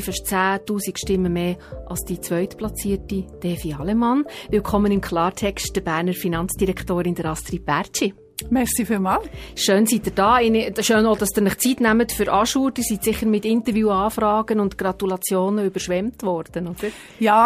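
Sharp single clicks at 4.97 s and 11.26 s are likely dropped samples: a handful missing, so the waveform jumps abruptly to a later value.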